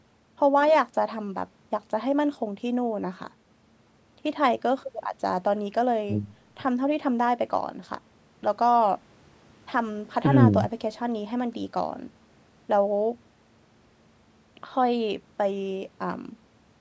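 No technical faults are audible.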